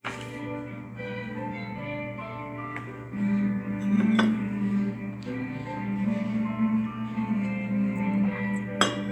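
No technical faults occur at any point in the audio.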